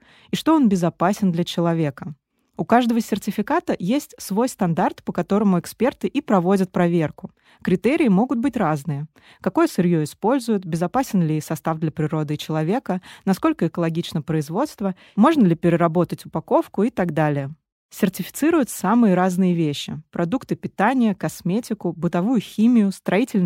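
No technical faults can be heard anywhere in this speech recording.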